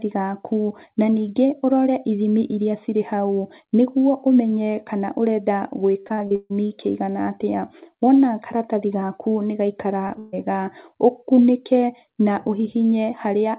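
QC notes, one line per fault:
6.0–6.52 s, repeated packet loss (robotic sound): the call dropped or delayed packets six times in about half a second, about 320 ms of audio in all, the longest hole 142 ms. The receiver kept patching each hole by stretching the last sound, so concealment fills over half this stretch. That repeated synthetic filling gives a choppy, metallic, robotic texture with pieces of the sound missing, within the already narrow band of the G.711 path, which carries nothing above 4 kHz.
10.08–10.11 s and 10.13–10.17 s, short concealed packet loss: twice in quick succession a single 20 ms frame failed to reach the decoder in time. Each time the receiver extended the preceding sound, following its pitch where voiced and using shaped noise where not, then faded back into the real signal. Because the holes are so short, each is heard as a brief smear or wobble, and a short consonant could be lost inside it.
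10.19–10.35 s, burst of packet loss: right after those two small drops, about 140 ms of consecutive packets went missing. The receiver covered almost the whole gap by carrying the last sound forward and lowering it as the gap went on, so no silence opens up. Instead a voiced sound turns into a held, fading buzz or an unvoiced one into a dying hiss, and when real audio returns the material from that gap is simply gone.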